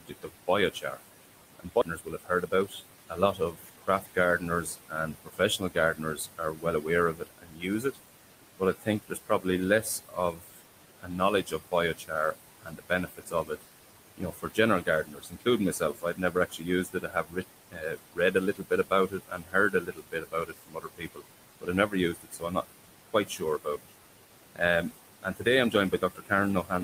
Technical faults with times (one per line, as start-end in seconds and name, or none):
0.00-26.84 noise suppressor artifacts
0.00-0.98 speech cut by the noise suppressor
1.59-7.97 speech cut by the noise suppressor
1.81-1.83 skip ahead
2.01-3.77 jitter buffer speed-up
8.59-13.64 speech cut by the noise suppressor
14.18-23.92 speech cut by the noise suppressor
25.23-26.71 speech cut by the noise suppressor